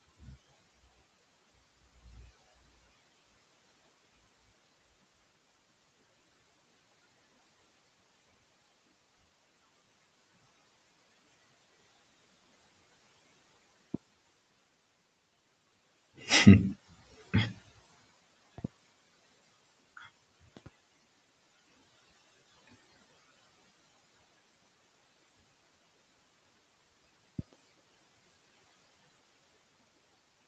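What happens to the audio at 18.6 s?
At 18.58 s there's a loud pop, really a pair of them back to back, over by 18.67 s. They jump out well above the speech, roughly 20 dB louder, while the talking carries on underneath. The likely cause is a sudden voltage step or spike, from something like a plug, a switch or static, getting into the signal, with the downstream circuitry shaping each spike into a sharp crack.

Under that moment, and all the way through, you can also hear noise suppressor artifacts. The suppressor is pulling the steady background down by about 21 dB, frame by frame, so the noise floor dips in the gaps and swells back under the speech.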